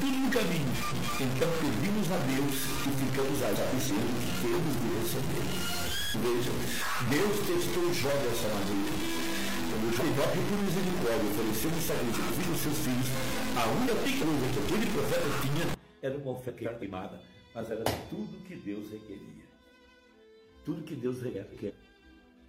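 A data bit that is likely stuck at a fixed value, from a broken line or converter, forces about half the samples off by that bit's weight from the start until 15.74 s. This stuck bit gives the audio a distortion that follows the waveform, and because the bit also flips with the sign of small values, the quieter gaps fill with a hiss that stops once the fault clears. Separately, two neighbouring runs of frames were decoded in swapped order seven times: 0.74 to 1.09 s, 3.53 to 3.91 s, 9.99 to 10.35 s, 12.13 to 12.49 s, 13.87 to 14.24 s, 16.48 to 16.84 s and 21.34 to 21.71 s. In each of these frames-out-of-order events, two blocks of about 171 ms play back to front, which fits runs of four frames each. The result is a short, garbled flutter, and no time is lost.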